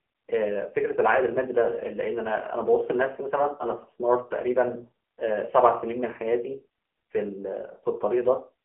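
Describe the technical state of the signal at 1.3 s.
At 1.3 s the speech sounds buzzy, thin and synthetic, confined to a narrow phone-line band of roughly 250 Hz to 3.4 kHz with nothing at all above 3.7 kHz. This is AMR narrowband mobile codec damage, present throughout the clip. The AMR-NB coder rebuilds the voice from a vocal-tract model excited by a handful of pulses per subframe, and such heavy artefacts point to one of its low-rate modes, around 6.7 kbps.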